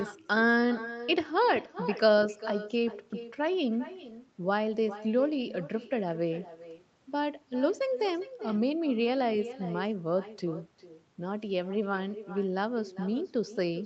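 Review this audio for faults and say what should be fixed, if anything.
The far end is playing the call on a loudspeaker, and its microphone picks that playback up again with nothing removing it. This is echo with no canceller. Throughout the speech, every phrase returns roughly 0.4 s later as a thinner copy about 13 dB below the talker. Turning on acoustic echo cancellation at the far end, or having that side use a headset, would prevent it.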